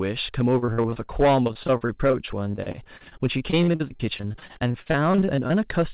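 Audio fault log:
throughout, hard clipping: The loudest moments of the speech break into a harsh, buzzy crackle, as though the peaks were scraping against a ceiling. The level was pushed about 10 dB past what the chain could hold, so roughly two percent of the samples were sliced flat. Those squared-off tops create harmonics well above the speech itself. Because the call path passes nothing above 4 kHz, the fuzz that remains is kept below that limit.
0.58 to 5.52 s, repeated packet loss (robotic sound): For almost the whole clip the speech stutters and turns machine-like, with short pieces going missing again and again. Dozens of brief gaps, the longest 43 ms, keep interrupting the stream. Each gap is covered by stretching out the sound that came just before it, and about a quarter of this span is that kind of patch-up. Each patch is followed soon after by the next gap, and that is what makes the sound robotic.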